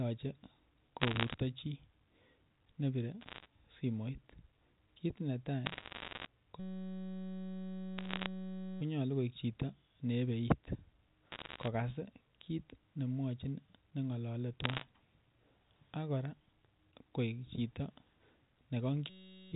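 Bit errors on a digital phone line crackle through this speech recording at 1.00–1.34, 3.21–3.46, 5.66–6.26, 7.98–8.26, 11.32–11.68 and 14.64–14.84 s. Somewhat under one percent of bits flip, and each flip corrupts a single sample, so hits on the sign or upper bits give sharp ticks over the otherwise intact speech. A system hang loop takes over from 6.60 to 8.81 s and again from 19.10 to 19.52 s. The output keeps replaying one 5.33 ms chunk while the rest of the system is frozen, and that fits a 256-sample ring buffer. The result is a steady buzz at 188 Hz, with more crackle layered on it around 8 s. Under all of this, the G.711 telephone band limit holds everything below 4 kHz.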